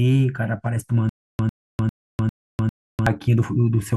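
From 1.09 s to 3.07 s the speech falls into a stutter with silent gaps. A burst of about 100 ms plays, then roughly 300 ms of dead digital silence, and that same fragment comes back five times on a steady 400 ms cycle. It sounds like the stream is catching on one tiny piece and choking. The likely cause is a playback stall, with each retry replaying the last buffered chunk and then running dry, so whatever should have filled those two seconds is simply gone.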